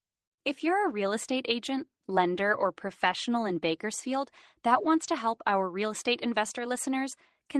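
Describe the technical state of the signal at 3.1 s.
Around 3.07 to 3.13 s there's a lost packet rebuilt from error correction. About 40 ms went missing, which fits two separate packets. The packet after each one carried a low-bitrate Opus copy of it, and the decoder played that copy, so there's no dropout. You just hear a brief patch that sounds rougher and grainier than the surrounding sound, which already has the Opus call path's usual coding noise.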